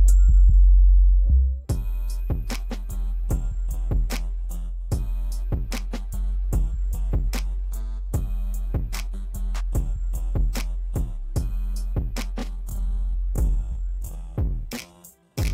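From 12.35 s to the end, a time-stretched section slows to about 0.6× pace at unchanged pitch, likely from stretching software, sounding dragged, with horizontally stretched spectrogram features.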